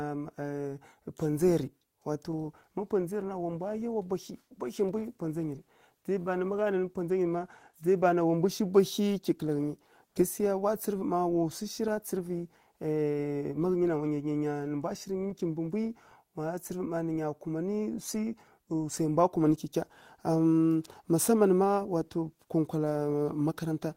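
From 10.07 to 10.15 s, just before "gasikeya wa", the sender most likely paused transmission under Opus discontinuous transmission, judging the stretch silent, and the receiver filled the gap with synthetic comfort noise in place of the background. For those 80 ms the real room tone, sitting about 52 dB below the loudest speech, gives way to a flat, featureless hiss whose level shifts by about 3 dB, before the genuine background returns with the next sound.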